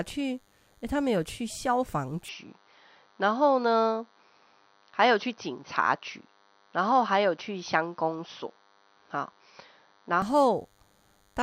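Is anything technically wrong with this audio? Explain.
Yes. There are two problems.

A DECT cordless phone buzz runs through the whole recording. A nearby handset or base transmits a burst every 10 ms, and the audio circuit rectifies it. The result is a thin, steady 100 Hz buzz with many harmonics, sitting about 40 dB below the speech.

From 2.29 s to 10.22 s, the speech turns dull and boxy. Nothing is present above 6 kHz. The level shifts by roughly 5 dB, and a new noise floor appears about 55 dB down. There is no gap at the changeover. The likely cause is the input switched to a poorer device, with a narrower band.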